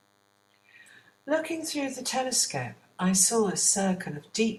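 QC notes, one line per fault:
Throughout: DECT cordless phone buzz. A thin, steady buzz runs under the speech from start to end. It sits at 100 Hz and carries a long train of harmonics, so it sounds edgy rather than like a low hum. A nearby DECT handset or base is sending a short radio burst every 10 ms. The audio circuit rectifies each burst into a click, and the regular clicks fuse into a tone. It stays faint, roughly 40 dB below the speech.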